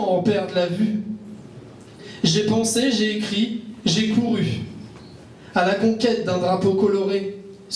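No technical faults can be heard anywhere in this clip.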